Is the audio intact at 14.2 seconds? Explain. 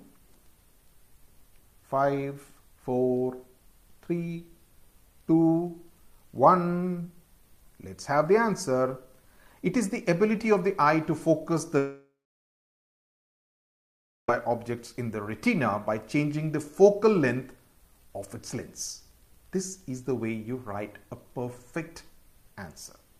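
No. 14.2 s falls near the end of a long network dropout running from about 11.78 s to 14.29 s. Roughly two and a half seconds of audio likely never arrived, so the receiver stretched the last bit of sound into a fading buzz or hiss for about a third of a second. From there, including 14.2 s, you hear silence or a faint steady noise. At 14.29 s the sound picks up again, with the missing stretch gone.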